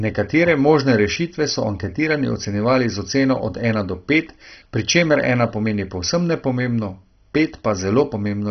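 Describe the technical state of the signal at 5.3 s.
At 5.3 s the speech is likely passing through heavy MP2 compression, as it does for the whole clip, with a bit budget that points to roughly 32 kbps. Upper sub-bands are starved and switched off, so nothing sounds above about 6.1 kHz, and the remaining bands, coarsely quantised and flickering, give a dull, gurgling, granular texture.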